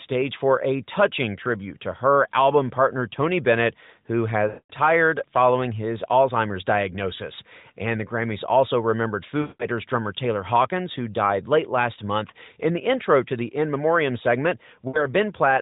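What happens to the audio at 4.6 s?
Between 4.48 and 4.71 s the speech is drawn out, fades to silence, then returns weak or rough. These are lost AMR speech frames: a 220 ms run, fitting eleven corrupted 20 ms frames, which the AMR-NB decoder filled by reusing the last good pitch and vocal tract settings at falling gain.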